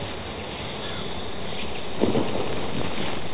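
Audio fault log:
0.64–0.66 s, skip ahead: the sound jumps forward with no gap because roughly 0.7 s of audio was dropped in transit or by an overflowing jitter buffer.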